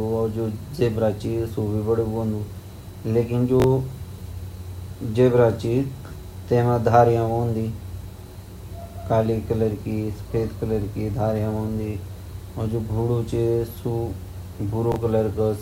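A speech recording with chunks out of order at 3.6 s and again at 14.92 s. In each spot one 20 ms chunk arrives one chunk late and swaps places with its neighbour, giving a brief jumbled stutter. A waveform shows three abrupt discontinuities across each 40 ms span, and a spectrogram shows thin vertical broadband lines there.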